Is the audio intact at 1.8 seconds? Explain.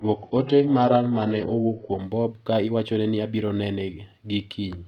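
No. At 1.8 s the treble is thin and partly synthetic, with strong codec artefacts and nothing above about 9.5 kHz. This is an adaptive stream starting at a low bitrate, which fits a very low-rate HE-AAC version, until the sudden, gapless step up at 2.0 s.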